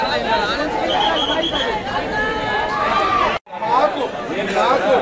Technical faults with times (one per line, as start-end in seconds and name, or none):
0.00-5.01 resampler restarted on every block